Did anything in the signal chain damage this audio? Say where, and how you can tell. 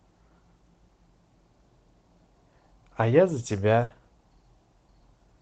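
Yes, in the network stage. At 2.58 to 2.60 s there is short concealed packet loss: about 10 ms was lost, and the receiver extended the previous sound, leaving a brief smear.

A burst of packet loss follows at 3.83 to 3.91 s. About 70 ms never arrived. Concealment stretched the last sound into a fading buzz or hiss, then jumped ahead.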